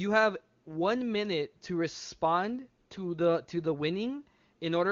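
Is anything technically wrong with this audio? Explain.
No, nothing's wrong here: it's speech carried over the AMR wideband (HD Voice) codec at its top rate of 23.85 kbit/s, where any coding traces are faint at most.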